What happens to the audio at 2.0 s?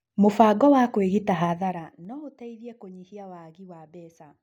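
At 2.0 s the level is still being pulled down in coarse steps, which is zipper noise, running from 1.45 to 2.13 s. Instead of a smooth fade, the gain drops in 2 dB jumps at around ten steps a second, falling by roughly 20 dB in total. Each unsmoothed jump puts a small discontinuity in the waveform, so a ticking, zipping texture rides on the speech as it gets quieter.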